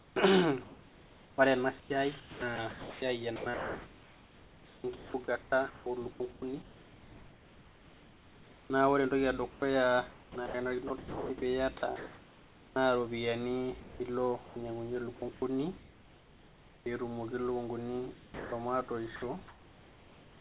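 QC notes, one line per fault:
0.00–0.16 s, comfort noise in place of the background: the opening 160 ms carries a smooth, featureless hiss about 3 dB quieter than the real room noise that follows. This is likely a discontinuous-transmission gap, where the receiver synthesised noise roughly matching the background.
1.8–8.7 s, 9.5–12.76 s, 13.8–15.42 s and 18.14–19.22 s, sound chopped by the voice detector: quiet syllables and word edges drop out. The first stretch, ending just before "naa ore", loses about 4.8 s in total. The later stretches lose about 1.6 s, 0.46 s and 0.44 s. This is likely a voice detector switching transmission on and off repeatedly.
16.84 s, onset clipped by the voice detector: about 20 ms at the start of a word is missing, so the word begins abruptly with no soft attack and comfort noise sits where its beginning should be. This is likely a voice detector reacting late to speech resuming.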